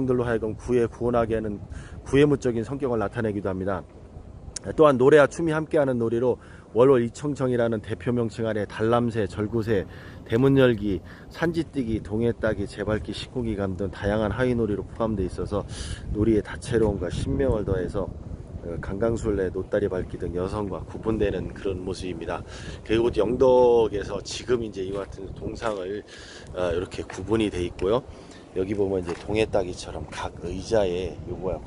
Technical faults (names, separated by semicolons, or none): imaging from linear upsampling